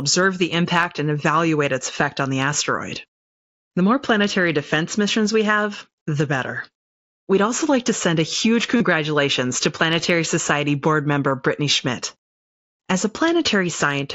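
At 8.76 to 8.81 s, concealed Bluetooth headset packet loss: a run of voice packets between headset and phone went missing, about 37.5 ms, which fits five headset frames. The receiver filled the gap by repeating the best-matching recent stretch of waveform, so the speech turns briefly buzzy at full level before a small warble as real audio resumes. A waveform shows a short periodic, copied-looking cycle. A spectrogram shows evenly spaced harmonic stripes inside the 8 kHz ceiling of the mSBC path.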